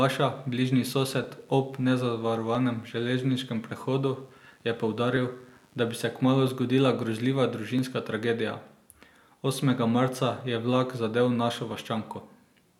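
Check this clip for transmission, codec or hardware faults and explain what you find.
There is one fault: likely clock drift buffer slips. Two clocks disagree by about 500 ppm, so a buffer overflows or runs dry and a few dozen samples are dropped or repeated. From 1.24 to 11.71 s, the speech carries a click about every 1.31 s.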